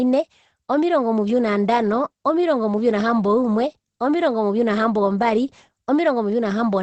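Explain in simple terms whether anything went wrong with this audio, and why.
The speech sounds muffled and hoarse from start to finish, with the crisp top end missing above about 8.4 kHz. This is likely Opus compression squeezed into its speech mode, which trims the highest sounds and roughens the rest to save space.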